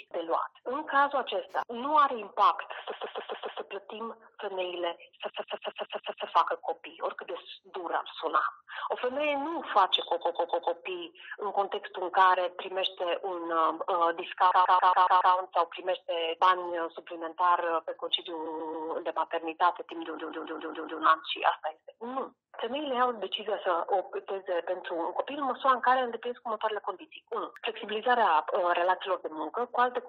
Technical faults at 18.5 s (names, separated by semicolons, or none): repeated frames